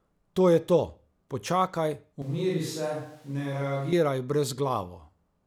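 From 2.22 to 3.93 s the speech jumps abruptly to a switch to a distant microphone, likely a camera mic: hollow, roomy, thinner, and about 5 dB quieter, with a visibly lower waveform and a raised noise floor under the spectrogram.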